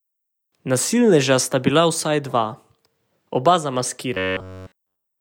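From 4.14 s to the end at 5.21 s, the speech turns into robotic sound from repeated short buffers. The voice becomes a rigid, metallic buzz. It carries a buzz at a fixed rate of 93.8 Hz, which fits a buffer of about 10.7 ms. Essentially all of this stretch is made of repeats. The likely cause is new audio arriving too slowly. The same short slice then plays over and over, and the real audio in between is lost.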